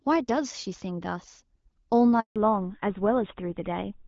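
At 2.20 s the speech cuts off and stays silent for 160 ms, until 2.36 s. This is a handover gap: the call was passed from one network link to another, and no speech frames arrived while the switch happened. The sound fades out within a few tens of milliseconds and there is clean silence with no comfort noise, stutter or repeated fragment. That sets it apart from ordinary packet loss, where concealment smears or repeats sound across the hole.

From 2.36 s to the end the audio has nothing above 4 kHz. This is a fallback to narrowband: the call dropped from HD Voice to an older narrowband codec. The change sounds like GSM full rate at 13 kbit/s. Before the gap, the clear wideband sound points to AMR-WB at 12.65 kbit/s, with only light coding damage. After it, sibilants lose their air and the speech turns duller and rougher. Because the bandwidth drops abruptly right after a handover silence and then stays fixed, this is a codec switch rather than a gradual filter or a brief glitch.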